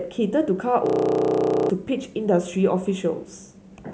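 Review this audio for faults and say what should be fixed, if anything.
From 0.86 s to 1.70 s, the speech freezes into a system hang loop. One 32 ms slice repeats 26 times, producing a rough buzz at 31.2 Hz. That fits a stalled driver replaying a 512-sample buffer. About 0.7 s of speech is lost. Prevent this with a watchdog that mutes output when buffer refills stop.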